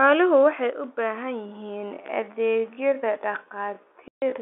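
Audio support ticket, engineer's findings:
Sudden gain jump, 0.70 to 0.84 s: level drops about 6 dB in one step, likely a gain setting or bit shift applied without a ramp. Speech and background noise fall together.

Time-stretched section, 1.42 s to end: likely software stretch to fill length, playback at 0.646x speed with pitch held by repeating short segments. Pace slows abruptly, pitch unchanged.

Packet loss filled with silence, 4.08 to 4.22 s: 140 ms gap, consistent with seven 20 ms packets dropped and replaced by silence. Speech cut by a dead hole with hard edges, over the G.711 telephone band of about 250 Hz to 3.5 kHz.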